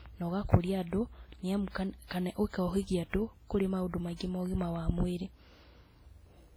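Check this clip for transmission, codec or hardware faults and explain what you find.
There are two faults: codec smearing across the whole clip, and one pre-echo just after four seconds.

The speech sounds ringing and washy throughout, with hiss that swells and fades with the voice. That's likely WMA compression, and the heavy damage suggests a low bitrate of around 24 kbps.

At 4.16 to 4.21 s there's pre-echo: a hiss of about 44 ms leads into an attack and softens it. The codec spread that loud moment's quantisation noise backwards through its block.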